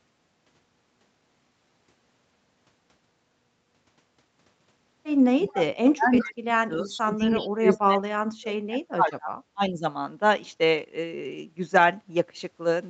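At 5.43 s the speech starts to duck. The level falls by about 25 dB until 5.72 s. This is speech suppressed in double talk. The likely cause is an echo canceller that heard both sides at once, could not tell its own talker from the loudspeaker echo, and turned everything down. A longer dip runs from 5.94 to 9.34 s, at its deepest about 40 dB down. A third dip, about 30 dB deep, follows from 9.53 to 9.85 s.

Inside these dips an echo leak shows. A copy of the speech returns 357 ms late. It appears from 5.53 to 5.64 s at about 10 dB below the speech. It comes back from 6.15 to 6.24 s, from 6.84 to 7.01 s and from 7.29 to 7.46 s, between about 15 and 20 dB down. A last trace, about 30 dB down, falls from 9.12 to 9.16 s. The likely cause is loudspeaker sound that an echo canceller did not fully remove before sending it back. The band stops at 8 kHz, which is the normal limit of the call's microphone path.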